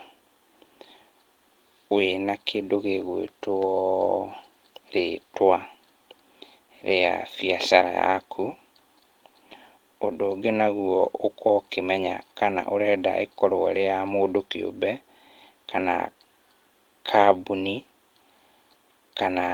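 Nothing technical goes wrong anywhere in this speech recording, so there's no fault to point to.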